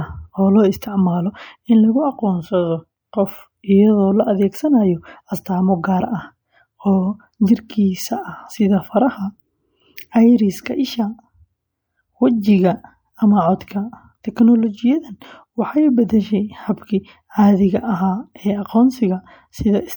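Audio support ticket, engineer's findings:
Pre-echo at 9.96 s and 15.20 s: short hiss smeared ahead of speech attacks, roughly 11 ms and 17 ms. Probable component: transform codec. Quantisation noise is spread across the whole block, so noise sized for the onset leaks into the quiet moment before it.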